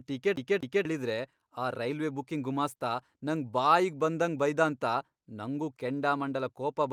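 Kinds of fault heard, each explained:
CD stuck on one turn: the same 245 ms of speech plays twice with a short mute at each jump, as a scratch knocks the laser back one track.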